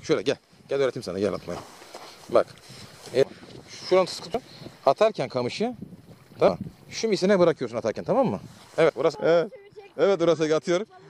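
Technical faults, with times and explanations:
4.34 s, 6.48 s, 8.90 s: compressed frames skipped. Whole coded frames went undecoded, so the audio jumps ahead about 200, 200 and 100 ms. That fits two, two and one frames of roughly 93 ms.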